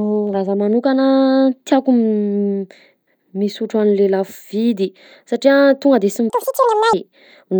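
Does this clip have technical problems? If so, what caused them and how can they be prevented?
Yes. From 6.30 to 6.93 s the speech jumps to double speed and rises a full octave (12 semitones), which is a case of audio read two samples at a time. The reader took each pair of samples as a single frame, as though the stream had two channels or samples twice as wide, so it consumed the data twice as fast. Prevention: declare and check the channel count and sample format consistently between writer and reader.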